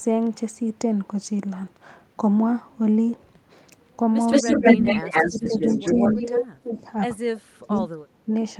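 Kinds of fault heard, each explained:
Echo leak: From 4.3 to 6.43 s a second copy of the speech trails the original by 174 ms, about as loud as the speech itself, so the two overlap into a doubled, smeared sound. A much fainter scrap of the same delayed copy returns briefly at 7.76 to 7.81 s. The likely cause is a far end playing the call on a loudspeaker whose echo canceller let part of the microphone pickup through and sent it back.
Speech suppressed in double talk: The talker's level sinks and breaks up in pieces at 4.42 to 4.85 s, 5.27 to 5.58 s, 5.75 to 6.78 s and 7.2 to 8.3 s. The first two dips are shallow, around 15 dB, but the later two go much deeper, around 35 dB, nearly muting stretches of sound. This likely comes from an echo canceller that, faced with both sides at once, could not tell talker from echo and turned everything down.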